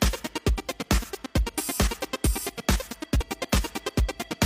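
At 3.16 s, lasting about 48 ms to 3.21 s, there is damaged data in a compressed stream. Part of the encoded stream was corrupted, so the decoder either misread those frames or rejected them, lost sync, and had to search for the next valid frame header before playback could resume. Unlike a simple dropout or an edit click, the disruption comes from inside the decoding itself. Garbled or discarded frames replace the sound for that brief span.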